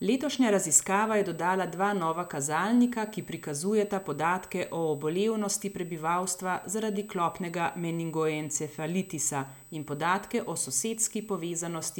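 Throughout the speech, USB whine sits at a fixed 8 kHz with its strongest component at 16 kHz, about 25 dB below the speech. Current drawn in 125-microsecond bus microframes leaks into the audio through the power or ground, and a spectrogram shows flat horizontal lines at both frequencies.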